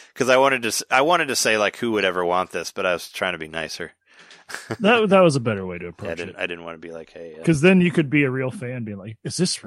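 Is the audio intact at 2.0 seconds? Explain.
No: a corrupt frame decoded at 2.01 s. Flipped bits in one compressed frame put energy at wrong frequencies, heard as a chirp, squeak, blip or burst of noise at about -30 dBFS.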